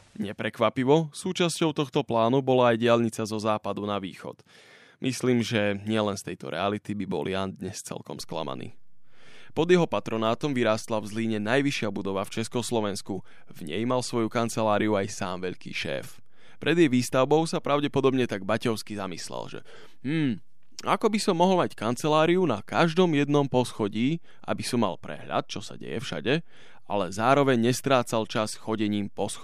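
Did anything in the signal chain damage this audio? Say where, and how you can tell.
Yes, a DC step at the converter or analogue input: a low thump at 8.21 s as the zero line jumps about -40 dBFS and holds to the end, unlike a transient click.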